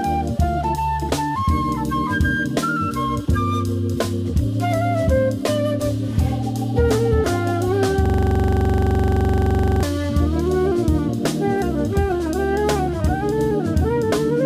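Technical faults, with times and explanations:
8.06 to 9.83 s: system hang loop, one 42.67 ms slice repeating at 23.4 Hz, a rattling stutter rather than a buzz, which fits a 2048-sample buffer.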